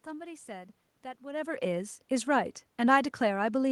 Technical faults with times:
none

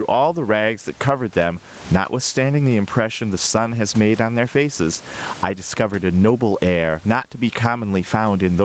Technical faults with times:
0.00-8.65 gain pumping

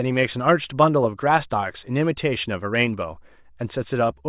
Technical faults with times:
none

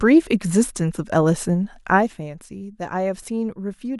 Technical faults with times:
1.90-2.29 zipper noise

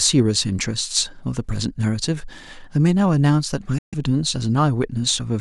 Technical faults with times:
3.78-3.95 Bluetooth dropout

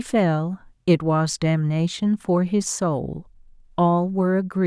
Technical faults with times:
none

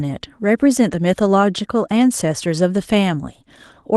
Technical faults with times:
none

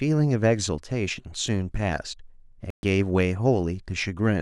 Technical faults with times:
2.70-2.83 digital broadcast dropout

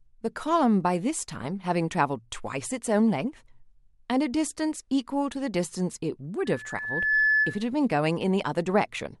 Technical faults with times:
6.45-7.66 loudspeaker feedback squeal

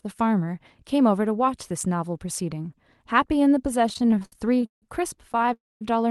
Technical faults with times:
3.89-4.83 repeated stalls (stutter)
5.33-5.49 repeated stalls (stutter)
5.53-5.82 call audio freeze

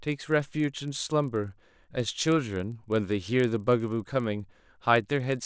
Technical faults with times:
0.00-5.46 resampler restarted on every block

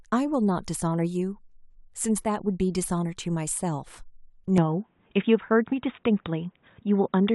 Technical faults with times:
4.58-7.35 input switched to a poorer device

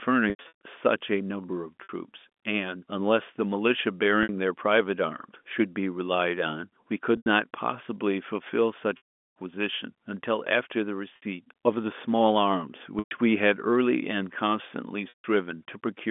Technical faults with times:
0.30-0.53 packet loss with pitch repetition
1.83-1.89 packet loss with pitch repetition
4.23-4.29 packet loss with pitch repetition
7.17-7.26 packet loss with pitch repetition
8.97-9.31 packet loss with pitch repetition
11.16-11.22 packet loss with pitch repetition
12.99-13.11 packet loss with pitch repetition
15.09-15.24 packet loss with pitch repetition

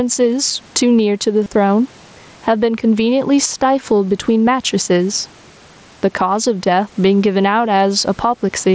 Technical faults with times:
0.00-8.75 gain pumping
1.44-1.46 concealed Bluetooth headset packet loss
3.48 concealed Bluetooth headset packet loss

